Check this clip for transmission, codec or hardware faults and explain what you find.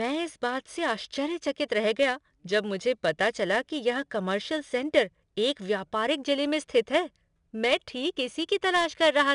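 One codec fault runs through the whole clip: 4-bit ADPCM compression. Each sample is stored as a coarse 4-bit step from a predicted value, so the coding error becomes a gritty hiss that rides on louder speech and roughens sharp onsets. The band stops at 10.6 kHz, which fits a rate near 22 kHz and a bitrate around 89 kbps.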